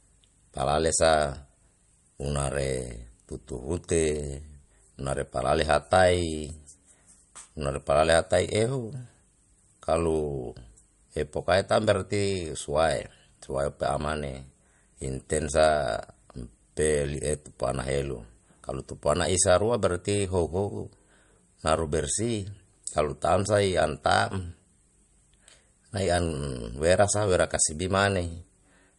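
Throughout this speech clip, nothing sounds above 11.2 kHz, and the s sounds swirl with watery, flickering artefacts. That points to MP3 compression, likely at a starved bitrate of around 52 kbps. A plain low-pass filter would cut the treble cleanly, without this frame-to-frame warbling.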